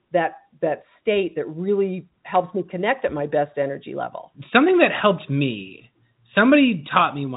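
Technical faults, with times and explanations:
No technical faults detected.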